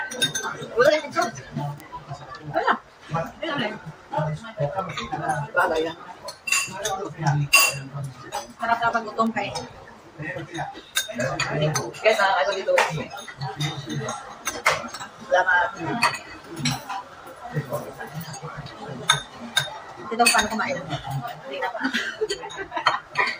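A digital input is being read on its own clock rather than locked to the sending device, and the two clocks disagree by something like 30 parts per million. Each time they slip a full sample apart, a single sample is dropped or repeated and its neighbours are misread. That produces word clock ticks: around thirty sharp clicks of uneven strength, recurring steadily about every 0.7 s from 0.31 s to 22.70 s.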